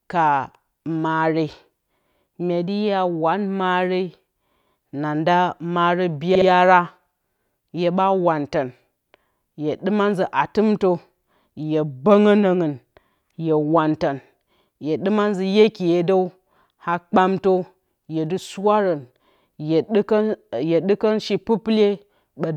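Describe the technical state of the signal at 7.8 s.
At 7.8 s the speech signal is intact, with no fault present at that moment.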